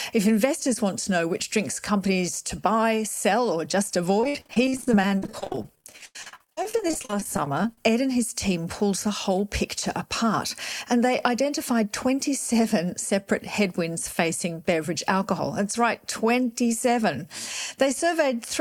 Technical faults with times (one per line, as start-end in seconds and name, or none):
4.20-7.78 repeated packet loss (robotic sound)